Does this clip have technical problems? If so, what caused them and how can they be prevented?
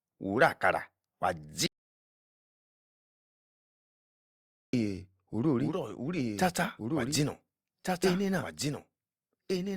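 Yes. An audio dropout to silence runs from 1.66 to 4.73 s, about 3.1 s of silence with no room tone. The speech simply stops, then resumes mid-flow. The input was likely lost while recording continued. Monitor input connections and mute states during capture.

From 5.55 s to the end, the speech is a doubled audio track. A second full-band copy trails by roughly one and a half seconds, somewhat quieter, with no decay. It begins abruptly. A duplicate signal path is the likely cause. Route each source through only one path.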